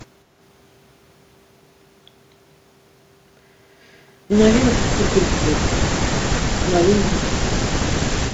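Speech with speech suppressed in double talk: it dips or chops out, by about 15 to 25 dB, at 4.72–5.21, 5.4, 5.79–5.94, 6.62–6.93 and 7.14–7.76 s, likely an echo canceller clamping down while both ends talked.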